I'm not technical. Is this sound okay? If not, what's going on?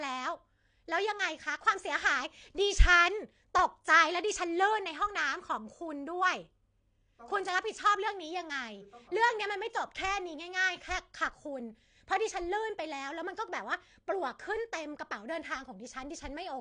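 No. Throughout, the speech sounds dull and plainly swirly, with no sound above 9.8 kHz, likely from strong AAC compression squeezing the file.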